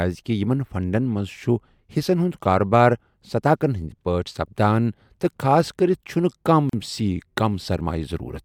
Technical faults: gap at a join of encoded pieces

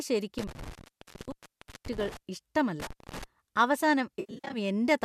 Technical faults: intermittent contact; AAC frame loss with concealment

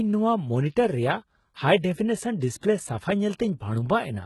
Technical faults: HE-AAC compression

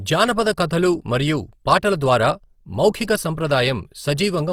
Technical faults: Opus compression

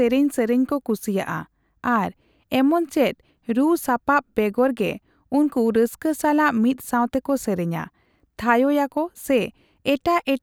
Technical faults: none

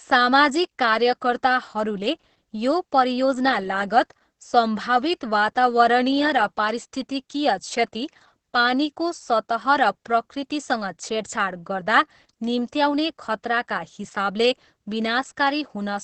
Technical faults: Opus voice compression

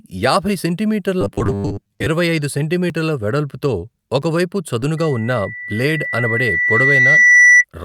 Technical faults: robotic sound from repeated short buffers; short concealed packet loss; loudspeaker feedback squeal

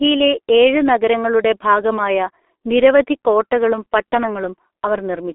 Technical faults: G.723.1 codec

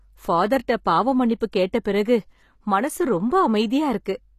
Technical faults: HE-AAC compression; pre-echo

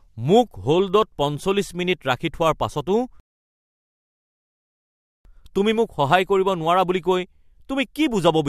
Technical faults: rebuffering stall

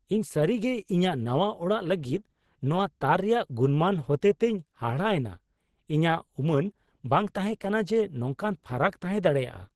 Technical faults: Opus compression

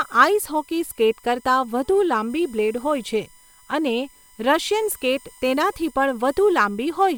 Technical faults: USB whine

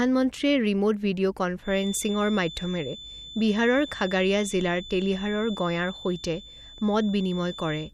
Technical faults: feedback whistle

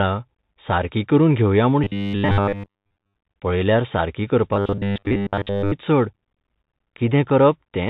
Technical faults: Bluetooth CVSD headset codec; robotic sound from repeated short buffers

